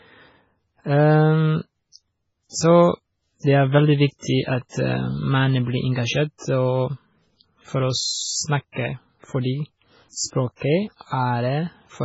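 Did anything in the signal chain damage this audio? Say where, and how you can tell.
Yes, at the codec stage, likely MP3 compression at a very low bitrate, around 16 kbps. The speech has nothing above 7.7 kHz throughout, with heavy watery swirl and smeared s sounds as weak frequency lines drop in and out from frame to frame.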